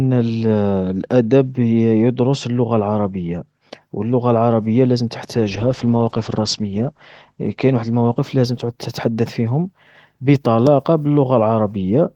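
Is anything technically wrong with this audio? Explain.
Yes. From 5.37 to 9.33 s, after "و اللغة العربية لازم" and before "فيهم بطلاقة", there is a call bitrate drop. The Opus encoder was starved of bits, which fits a fall from 32 to 10 kbps. Bandwidth narrows from 12 kHz to 8 kHz, and the speech turns coarse and muffled, worst for about 1.6 s.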